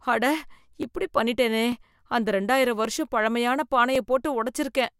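At 0.83 s, just before "இப்படி பண்ணிட்டேனே", then at 1.72 s right after that phrase, at 2.85 s after "அந்த இரண்டாயிரம்", and at 3.95 s, the speech carries a single sharp click, most likely from dropped samples. Each time, about 0.7 ms of signal goes missing, so the waveform steps abruptly from one value to a later one. On a spectrogram each click shows as a thin vertical line across the full frequency range.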